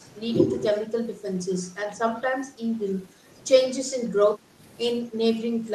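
At 3.13 s the room tone behind the speech sags for about a tenth of a second, then comes back at 3.24 s. The same thing happens again from 4.39 to 4.58 s, this time lasting closer to a fifth of a second. Both are the background gated by the echo canceller. While the far end was playing, the canceller clamped the mic down, by about 7 dB at its deepest, so the ambience briefly ducks and then recovers once it releases.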